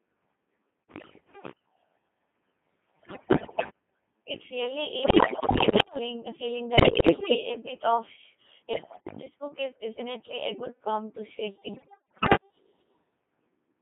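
The whole clip runs through the Codec 2 vocoder. The decoder rebuilds the speech from sine waves using pitch, voicing and a spectral envelope, so it sounds robotic and buzzy. The heavy damage fits a rate near 2.4 kbit/s, within a 200 Hz to 3.5 kHz band.

Bit errors on digital voice radio strike six times: 0.89–1.52 s, 3.00–3.70 s, 5.04–5.98 s, 6.78–7.43 s before "a bit of", 8.74–9.22 s before "book is definitely a", and 11.74–12.36 s after "good prompt to shake". Corrupted frame parameters make the pitch, level and tone lurch into warbles and bleeps. The worst bursts suggest roughly one bit in five flipped.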